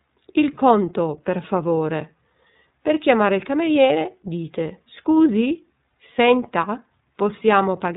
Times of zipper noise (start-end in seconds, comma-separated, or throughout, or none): none